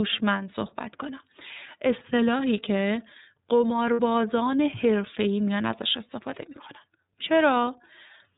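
From the start, the speech runs through the iLBC codec. The band stops at 4 kHz, so everything above is gone. The coder builds each frame's excitation on its own, with no help from the frame before. The damage is plainly audible. The speech stays clear but sounds rough and synthetic. The sound fits the 13.33 kbps mode with 30 ms frames.

At 3.93 s, lost iLBC frames cut in, lasting to about 4.00 s. The gap fits two lost 30 ms frames, about 60 ms in all. The decoder fills it by repeating the last pitch cycle mixed with noise. It comes across as a held vowel, buzzy or breathy. Because each iLBC frame stands alone, the speech comes back right almost at once.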